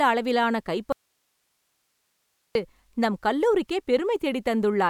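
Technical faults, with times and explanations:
0.92 to 2.55 s, audio dropout to a faint residue: the speech cuts out abruptly and stays gone for about 1.6 s. The gap is not silent. It holds only hiss, roughly 50 dB below the speech. The cut and the return are sudden, unlike a pause or a fade. Speech resumes mid-flow on "நம் கல்லூரிக்கே". The likely cause is a brief loss of the signal ahead of a stage that stayed live, leaving its own noise floor audible.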